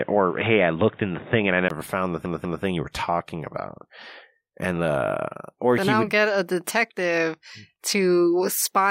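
Speech that opens dull and boxy: until 1.70 s nothing above 3.7 kHz reaches the recording, and the background noise sits roughly 35 dB down. A 20 ms gap then comes just before "found the", the sound opens up, and the spectrogram's upper band fills in. This is likely an input switched to a poorer device. Repeated frames come next. After "found the", from 2.26 to 2.64 s, a 192 ms block plays twice more, which fits a run of six frames. This adds 384 ms before "you were talking about" and shows as identical copied patterns.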